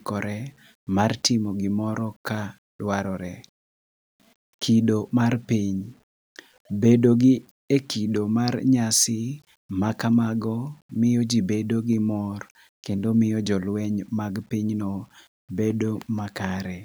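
Throughout the speech, a grainy distortion rides along with the signal, turning quiet passages and fading syllables gritty, roughly 40 dB below the speech. The likely cause is low bit depth without dither: rounding to around 9 bits makes the error follow the signal.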